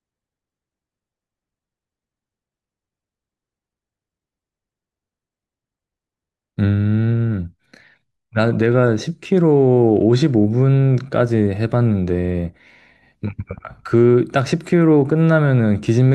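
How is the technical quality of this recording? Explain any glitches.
No glitches or technical faults can be heard anywhere.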